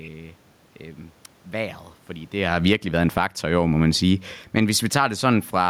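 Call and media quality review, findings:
Automatic gain falling, 2.38 to 3.34 s, just after "vejret fordi": level sinks about 11 dB over roughly a second; AGC judged input too loud or too noisy and pulled gain down. Room noise sinks with the speech, unlike the talker moving near 2.5 s, which changes only the voice. Second automatic gain falling, 3.90 to 5.65 s: about 7 dB slow decline, again with the background dropping in step, so the gain stage is at work, not the talker.

Automatic gain rising, 2.78 to 3.91 s: speech and room noise swell together about 3 dB across a second; AGC raising gain against a quieter input, overlapping and fighting the fall in progress. Second automatic gain rising, 5.04 to 5.49 s: about 4 dB lift after input fell about 17 dB, faster than the first. A talker coming closer would raise only the voice; here the background rises with it, marking the control loop.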